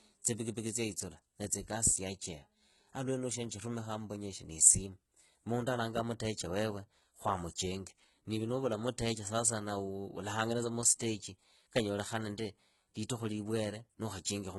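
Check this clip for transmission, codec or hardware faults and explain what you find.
Two codec faults are audible in the speech.

Throughout, the treble sounds gritty and metallic, with s sounds lisping and nothing above 11.8 kHz, likely HE-AAC compression rebuilding the highs from copied lower bands, consistent with roughly 16 kbps.

At 11.0 s, a brief hiss smears an attack. This is pre-echo: quantisation noise spread across the transform block fills about 16 ms before the onset.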